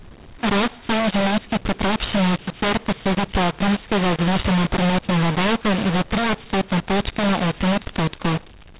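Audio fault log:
throughout: mu-law and A-law mixed up. The speech was coded with G.711 mu-law but decoded as A-law, so each byte lands on the wrong logarithmic curve. Sample levels come out scrambled, some too large, some too small, and near-silent samples jump well above zero. The result is harsh, gritty speech with hiss filling the pauses. A waveform shows a thick noise floor between phrases, and a spectrogram shows broadband distortion smeared up to the 4 kHz ceiling.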